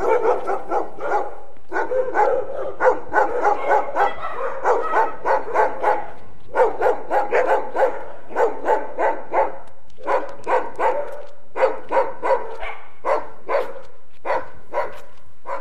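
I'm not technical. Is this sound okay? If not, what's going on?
No. The whole clip has a DC offset: the waveform sits slightly off centre from start to finish. Unlike mains hum or low rumble, you won't hear it, but it wastes loudness room and can cause a click when the sound starts or stops.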